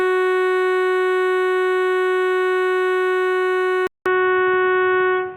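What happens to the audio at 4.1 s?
The recording's input has most likely switched to a poorer device at 3.87 s, and the music stays on that path to the end of the clip at 5.37 s. After a gap of about 0.19 s at the switch, the music returns through a narrower channel with nothing above 3.6 kHz, so it sounds dull and boxy. There is also new background noise roughly 30 dB below the music, and the overall level barely changes.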